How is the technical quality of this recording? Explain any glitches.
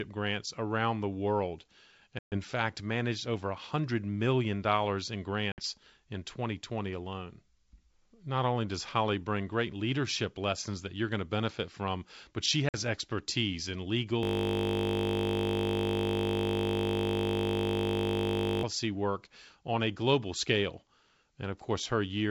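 The recording has two kinds of fault: three short dropouts from packet loss on an ADPCM call, and one long system hang loop. The wideband telephone sound itself is clear, consistent with G.722 coding, with at most a faint upper-band hiss.

Packet loss on an ADPCM call occurs at 2.19 to 2.37 s, at 5.52 to 5.62 s just after "million in", and at 12.69 to 12.75 s after "benefit from but she". Lost packets leave silent holes of about 130, 60 and 50 ms. Because the decoder's predictor and step size no longer match the sender's, the speech resumes slightly distorted before settling.

A system hang loop runs from 14.23 to 18.63 s, between "expertise in" and "work on a global". The system froze while the audio hardware kept replaying one 20 ms buffer, roughly 220 times. This produces a steady 50 Hz buzz in place of the speech for over four seconds.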